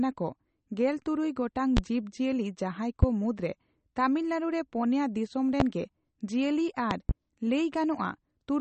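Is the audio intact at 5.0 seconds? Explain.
No. At 5.0 seconds, as throughout the speech, the sound is plainly watery and swirly with nothing above 8.4 kHz, likely from MP3 compression at a rate that fits about 32 kbps, where weak frequency lines flicker on and off between frames. That flickering separates it from a simple low-pass filter.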